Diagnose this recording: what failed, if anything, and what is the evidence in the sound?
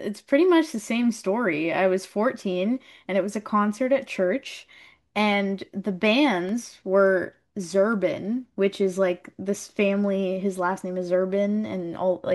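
The failure is at playback from the disc: a scratch or blemish corrupted more data than the player's error correction could rebuild, once per revolution. The player concealed the bad samples by interpolating or muting them, which leaves CD scratch ticks in the speech. There are six short ticks between 6.49 and 7.93 s, about four per second, the longest about 2 ms. That steady, rotation-locked spacing marks them as disc damage.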